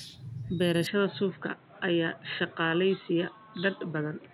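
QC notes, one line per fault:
0.87–4.33 s, input switched to a poorer device: at 0.87 s the speech abruptly turns dull and boxy, with nothing above about 4.1 kHz, and a new background noise appears roughly 30 dB under the voice. There is no gap at the change and the level stays about the same. The likely cause is a move to another microphone or a headset call profile. A simple low-pass filter or codec bandwidth drop would not bring in its own noise floor or change the tone like this.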